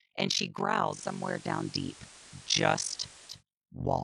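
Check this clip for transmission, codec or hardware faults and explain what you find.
Two faults affect this speech clip: one runs its whole length, and the other covers a stretch in the middle.

Throughout the clip there is a harsh, robotic flutter, with the level pumping around 50 times a second and dipping by about 60 dB at each trough. This is overlap-add ripple. The signal was split into windowed frames and reassembled with overlaps whose gains don't sum evenly, so the level swings once per frame.

From 0.84 s to 3.43 s, hiss rises to roughly 20 dB below the speech, while the level stays the same. This is digital radio blending to analogue. The receiver lost its digital stream and cross-faded over 187 ms to the FM broadcast, then blended back.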